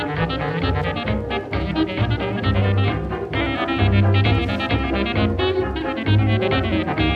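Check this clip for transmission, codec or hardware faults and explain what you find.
There's one hardware fault: Wi-Fi interference, running from 0.49 s to the end of the clip. A Wi-Fi radio sitting too close to the audio circuitry sends a beacon every 102.4 ms, and the circuit rectifies those RF bursts into the audio band. You hear it as a steady ticking just under ten times a second, sitting quietly underneath, roughly 35 dB below the main sound.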